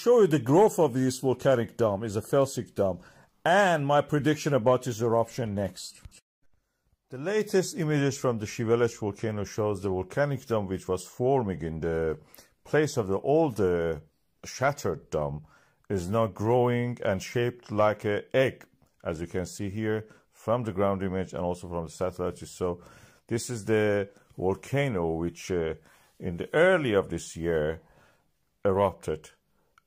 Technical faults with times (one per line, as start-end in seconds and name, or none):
none